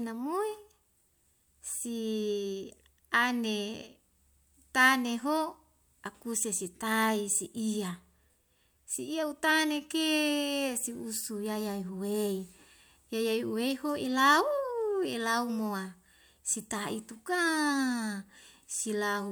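No technical faults are audible.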